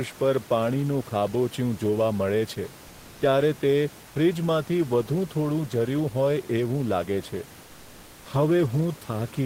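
From 4.07 to 4.15 s, comfort noise in place of the background. For about 80 ms the room noise, sitting about 24 dB below the speech, turns flat and featureless, about 3 dB quieter. Likely cause: discontinuous transmission, with the receiver synthesising filler noise during a pause.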